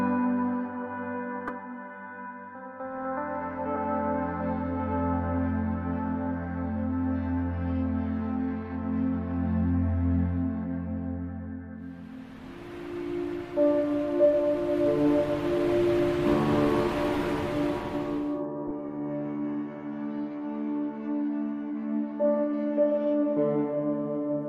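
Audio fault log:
1.47–1.51 s, 3.76 s, 18.67–18.71 s: corrupt frame decoded. At each point a compressed frame arrived with damaged bits and the decoder played it anyway, so misread gains or codes placed energy at wrong frequencies for roughly the span of the bad frames. Each event is heard as a brief chirp, squeak, blip or noise burst. The durations point to about two or three frames each. The first event reaches about -15 dBFS and the later two about -25 dBFS.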